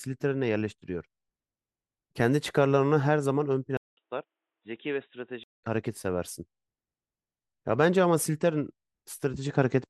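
At 3.77 s the speech drops out for about 200 ms, then returns dull and boxy, with nothing above 3.8 kHz, a few decibels quieter and over faint new background noise. At 5.64 s the full bright sound comes back. This is most likely the input switched to a poorer device. A plain filter or codec bandwidth drop would narrow the band alone, without the gap at the switch or the change in level and background noise.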